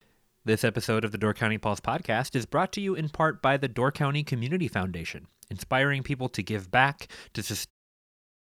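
Nothing in this speech recording stands out as a technical problem, and the ending is a gentle editor's fade-out that begins around 7.5 s and finishes at 7.71 s.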